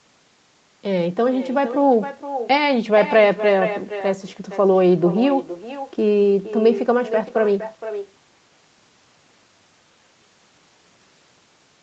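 Echo with no canceller runs throughout the speech: a copy returns roughly half a second late, about 11 dB below the talker, and thinner. The far end's loudspeaker fed its microphone, and nothing removed that loop before sending it back.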